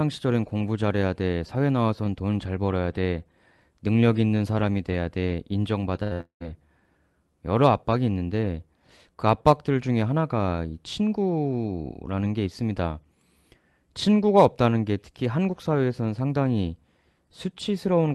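At 6.03 s and again at 6.13 s, a burst of packet loss drops about 80 ms and then 60 ms of speech. The receiver stretches the last sound into a fading buzz or hiss before the speech resumes further on. From 6.21 to 6.44 s, the concealment fades into roughly a tenth of a second of silence. This is likely a long network dropout, with about 200 ms of speech missing.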